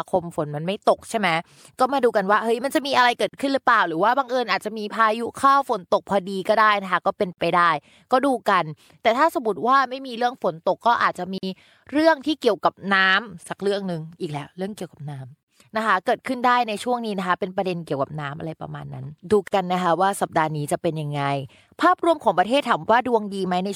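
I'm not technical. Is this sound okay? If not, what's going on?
No. There's a gap at a join of encoded pieces at 3.29, 7.33, 11.38, 15.43 and 19.48 s, one every 4 seconds. The speech drops out for about 50 ms, then resumes. The audio was compressed in separate chunks and joined, and each chunk's built-in start and end padding was left in.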